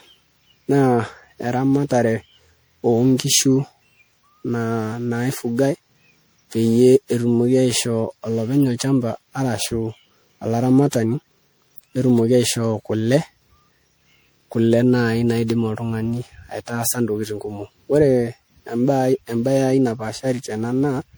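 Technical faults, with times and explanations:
Throughout, generation loss: the speech sounds swirly, hollow and smeared, with consonant attacks blurred, more than a single MP3 pass at around 96 kbit/s would give. It's likely from roughly ten re-encodes, each quantising on a shifted frame grid so the damage piles up.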